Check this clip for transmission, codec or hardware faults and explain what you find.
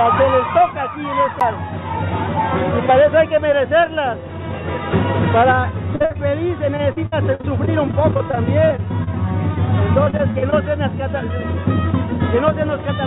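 Two kinds of fault show up, a CD skip and repeated packet loss, heard over telephone-band audio from the call path.

At 1.40 s there's a CD skip: the laser jumped tracks, so the sound ticks, mutes for about 10 ms and resumes from a different spot.

Repeated packet loss (robotic sound) runs from 5.96 to 9.09 s and again from 10.05 to 10.64 s. Lost or late packets keep getting patched by stretching the last sound, so it turns choppy with pieces missing. The first stretch has around twenty dropouts, the longest 57 ms. The second has six, the longest 38 ms.

Underneath it all, nothing reaches above 4 kHz, which fits G.711 A-law at 64 kbps on the call path.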